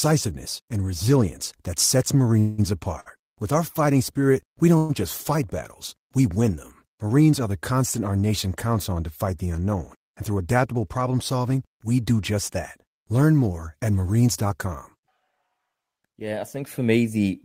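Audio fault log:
2.39–2.60 s and 4.78–4.91 s, call audio freeze: Right after "and resilience that sets", the last sound hangs on as a fading buzz for about 187 ms, and after "our fighting spirit we" it does the same for about 114 ms, never dropping to silence. The cause is likely packets held up in transit, so the jitter buffer ran dry and the receiver kept extending what it had. When they arrived, playback resumed where it stopped, so nothing is lost, but each gap adds its length to the delay.
3.00–3.08 s, short stall from a late packet: One packet wasn't there on time, so the receiver stretched the preceding sound by about 57 ms until it showed up, then carried on from the same spot. You hear a sound held a touch too long with a slight buzzy dip rather than a dropout. Nothing goes missing, but the delay grows by those 57 ms.
9.73–10.99 s and 14.43–15.21 s, jitter buffer speed-up: The buffer is holding more than it wants, so the receiver trims it by cutting tiny pitch-period-sized slivers over and over. 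The first stretch runs about 8% fast and sheds roughly a tenth of a second. The second, just after "more at", runs about 6% fast and sheds around half that. Pitch stays put, but the speech sounds a bit rushed.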